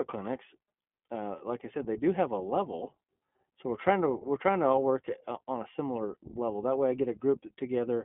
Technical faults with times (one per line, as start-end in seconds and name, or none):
0.00-8.04 iLBC codec